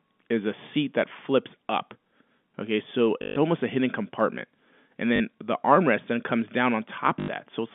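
A short robotic stutter breaks the speech at 3.22 s for 140 ms, again at 5.16 s for 40 ms, and at 7.2 s for 80 ms, each with a buzzy repetition. This is packet loss with the last packet repeated: audio went missing and the receiver replayed the previous chunk until new data arrived. Those replays seldom align with the voice's pitch, and the roughly 50 Hz buzz fits 20 ms packets, all within the narrow telephone band of G.711.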